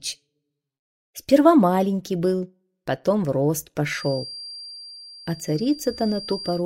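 From about 3.85 s to the end, a thin, steady feedback whistle sits behind the sound at 4.7 kHz, roughly 20 dB down and swelling and fading slowly in level. It's likely a speaker-to-mic loop hovering right at the edge of feedback without quite running away.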